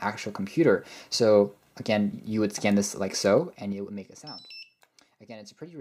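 From 3.30 to 4.35 s there's zipper noise: the level drops by something like 20 dB, but in 3 dB jumps, roughly five a second, with no smoothing, so each jump leaves a small click and the fade ticks its way down instead of gliding.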